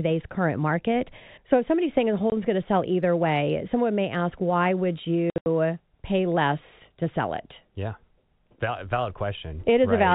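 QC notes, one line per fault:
2.3 s, packet loss filled with silence: a single 20 ms dropout with hard edges, where one lost packet was replaced by digital silence, which fits a 20 ms packet size.
5.3–5.46 s, packet loss filled with silence: a stuttering burst of holes totalling 140 ms across 160 ms, longest run 80 ms. Consecutive packets went missing and each gap was zero-filled, so the sound chops in steps of the packet length.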